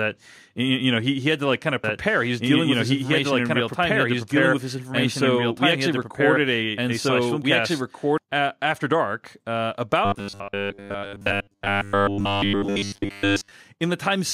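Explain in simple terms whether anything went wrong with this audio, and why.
Doubled audio track, from 1.84 to 8.18 s: right after "to like kind of", a second copy of the speech plays alongside the first, about two seconds behind and roughly as loud. It has no echo tail or room sound and stops abruptly. The likely cause is the same sound being picked up twice, once through a slower route, so both copies end up mixed together until "uh after dark uh".

Robotic sound from repeated short buffers, from 10.05 to 13.51 s: just after "uh after dark uh", the speech turns into a stiff, metallic buzz. New sound is likely arriving too slowly, so the playback keeps repeating the last tiny slice, about 10 ms long, to fill the gaps. Most of the real audio in this stretch is skipped. Those rapid repeats create a fixed 100 Hz drone that roughly follows the speech.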